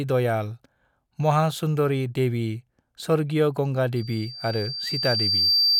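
Right after "महासुंदरी देवी स्वर्गीय गंगा", at about 3.96 s, loudspeaker feedback squeal kicks in and runs to the end of the clip. The mic is hearing its own speaker, and at 4.7 kHz the loop gain tips past unity, so that tone feeds on itself. You hear a thin whistle swelling over roughly a second and a half until it's sitting a few dB above the speech, a piercing, steady squeal.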